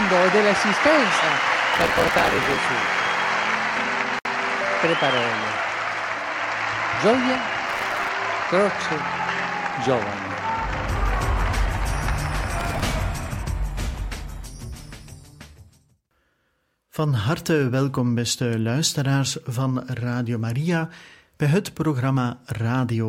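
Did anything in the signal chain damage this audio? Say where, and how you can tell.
Yes. Processor overload crackle, at the driver or buffer stage, sits at 1.74 to 2.56 s, 7.69 to 8.09 s and 12.60 to 12.86 s. Each burst is a gritty tearing. Roughly 70, 40 and 15 tiny buffers missed their deadlines, and each slot replayed old audio with hard edges. The grain fits buffers of about 5 ms.

A gap at a join of encoded pieces, a codec-stage fault, opens at 4.19 s. A 62.6 ms gap cuts into continuous sound, with smeared edges, then resumes where it stopped. Separately encoded pieces were joined untrimmed, keeping encoder delay and final-frame padding.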